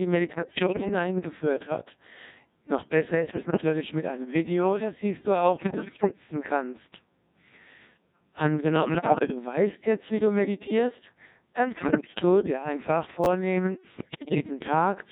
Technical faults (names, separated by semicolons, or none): Codec 2 vocoder; bit errors on digital voice radio; chunks out of order